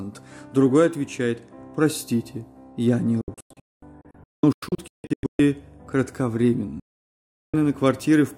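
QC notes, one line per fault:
3.21–5.40 s, digital broadcast dropout. The sound breaks into many short holes scattered over about 2.2 s. About 1.28 s is lost in total, and the longest gap is 224 ms. Each cut is abrupt, with a fade of about 3 ms. The receiver muted whenever frames failed, and the hole lengths fit 32 ms frames.
6.80–7.54 s, digital broadcast dropout. The sound mutes again, with about 0.74 s lost. The cut has the same 3 ms fade, so it sounds sudden rather than faded. Bad frames were discarded until good frames returned, and the missing audio is gone for good.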